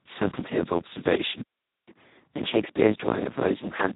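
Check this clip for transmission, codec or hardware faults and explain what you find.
Three faults are audible: codec damage throughout, one dropout, and a sped-up stretch after it.

Speex codec, throughout: the speech sounds hoarse, noisy and close to robotic, which fits Speex at its lowest settings, around 2 kbps. With so few bits for the excitation signal, the codec behaves almost like a vocoder, and nothing remains above 3.8 kHz.

Playback stall, 1.42 to 1.89 s: the sound cuts out mid-flow for about 0.45 s of silence and then resumes. The likely cause is the player running out of buffered data, or its thread being blocked, so output stopped until it recovered.

Catch-up at higher speed, 1.89 s to the end: after the gap the speech runs 1.15 times faster and about two semitones higher. The player is resampling its backlog to win back the lost time, so tempo and pitch rise together.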